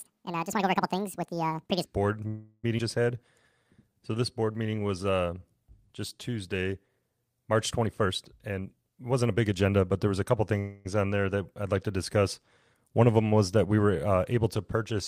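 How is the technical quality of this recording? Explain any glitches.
The recording has several clear glitches, mostly from an unstable call connection, plus an opening section played at the wrong speed.

From 0 to 1.85 s, a section at the wrong speed, likely from a wrong playback clock, runs the speech 1.79 times too fast, raising pitch around ten semitones.

Call audio freeze at 2.27–2.65 s: delayed packets likely emptied the jitter buffer, so about 360 ms of filler (a fading continuation ending in a short 40 ms silence) was inserted before the speech resumed intact. The same happens at 10.59–10.87 s, with about 259 ms of filler and no silence.

Skip ahead at 2.77–2.80 s: roughly 200 ms of audio was dropped, so the speech jumps forward across an almost direct join.

Jitter buffer slow-down from 3.64 to 5.49 s: repeated pitch periods added 234 ms, so speech runs at 88% speed at unchanged pitch and sounds drawn out.

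Jitter buffer speed-up from 7.86 to 9.89 s: trimming pitch periods removed about 400 ms, so speech runs at 118% speed at normal pitch and sounds hurried.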